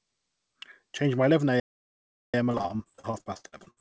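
Right after "my eleven", at 1.60 s, the speech drops into dead silence and stays there until 2.34 s, a gap of about 0.74 s, before picking up again. That mid-flow hole is a playback stall: the player most likely ran short of incoming data, or its output thread was held up, so nothing reached the output until it recovered and resumed.

From 2.52 s to the end of the clip at 3.81 s, the speech turns choppy, with fragments missing. This is repeated packet loss: audio packets kept arriving late or not at all over this stretch. Each gap was patched by stretching the last bit of sound, and another gap followed close behind, so the patches pile up into that choppy texture. Throughout, the call path's G.722 codec leaves nothing above 8 kHz.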